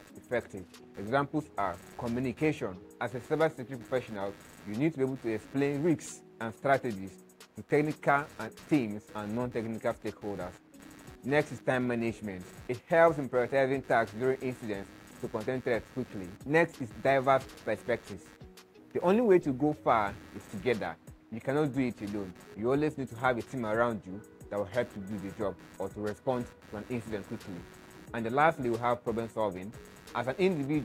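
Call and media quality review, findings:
Computer activity noise throughout: processor, graphics or mouse load disturbing the shared audio ground. Buzzing pulses around 100 Hz, roughly 25 dB below the sound, following machine activity, not the audio.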